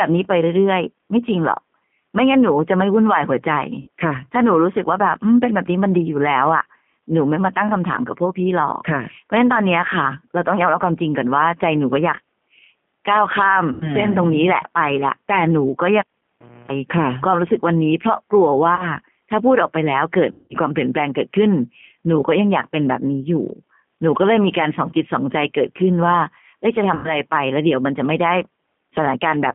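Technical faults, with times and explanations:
throughout, G.729 codec: The speech is carried at 8 kbit/s by a codec that rebuilds each 10 ms frame from a vocal tract filter, pitch predictor and a few pulses. The band runs only from 150 Hz to 3.4 kHz, and the roughness and synthetic edge are plainly audible.
3.81–3.88 s, 13.72–13.96 s, 18.76–18.85 s, 20.32–20.56 s and 26.95–27.17 s, VoIP packet loss concealed by the speech codec: Gaps of 60, 90, 30, 180 and 90 ms fit whole 30 ms packets going missing. The decoder stretches its last pitch and filter into a fading buzzy tone or coloured noise, and the sound stays weak briefly after each gap.
16.00–16.71 s, cable pulled and plugged in: A pop marks the cable coming out, then about 660 ms of near silence. About 280 ms of that is 60 Hz mains buzz, as the plug tip touches before full contact. A second pop follows as the sound returns.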